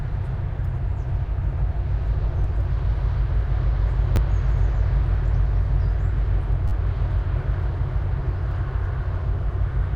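Repeated buffer faults occur at 2.44 s, 4.16–4.18 s and 6.68–6.72 s. New audio arrived late, so the last 10.7 ms block, which fits a 512-sample buffer, replayed once, twice, then four times. Each is heard as a hard-edged click or brief buzz, with essentially no audio lost.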